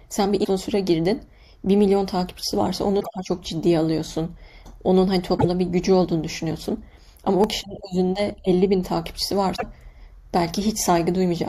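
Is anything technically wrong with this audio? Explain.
Yes, there are two kinds of fault.

At 0.43, 2.99, 5.37 and 9.55 s, the speech jumps ahead, and a chirp or noise burst of about 40 to 85 ms follows. The likely cause is a broken MP3 bit reservoir. Frames were lost, and the next frames read borrowed bits from the wrong data, with timing that fits 26 ms frames.

At 7.44 s there is a single brief click or buzz. This is a repeated buffer. Fresh audio arrived late, so one tiny block, consistent with a 64-sample buffer of about 1.5 ms, played twice. The hard joins make the click or buzz.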